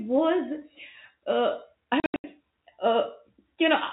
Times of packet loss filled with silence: 2.00-2.24

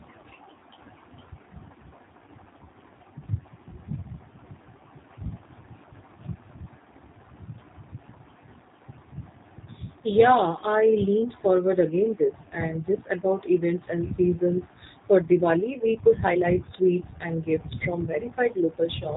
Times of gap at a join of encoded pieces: none

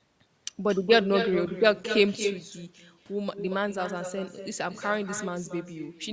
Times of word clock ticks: none

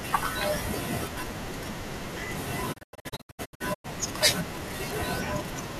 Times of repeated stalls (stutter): none

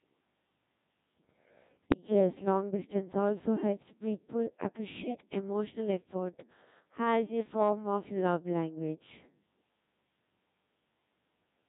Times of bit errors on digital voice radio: 1.83-1.97

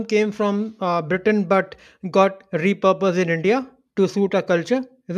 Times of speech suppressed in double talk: none

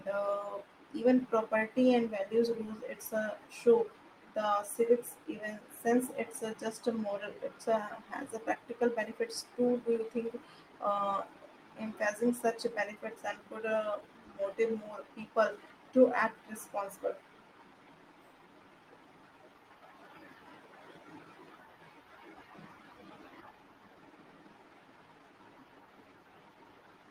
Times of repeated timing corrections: 0.01-26.64

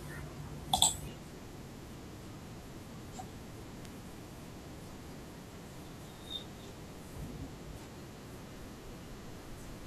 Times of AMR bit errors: none

